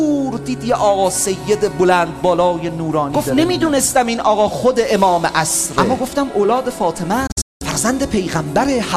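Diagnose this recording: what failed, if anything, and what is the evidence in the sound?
A digital broadcast dropout occurs between 7.27 and 7.62 s, at the reception and decoding stage. The sound fades out over about 8 ms and goes silent in several short holes, the longest lasting 192 ms. The gaps total 264 ms across a 336 ms span, which fits roughly eleven 24 ms frames being lost. The receiver lost the signal or rejected corrupted frames and muted until valid frames resumed, so the audio sent during those holes is gone.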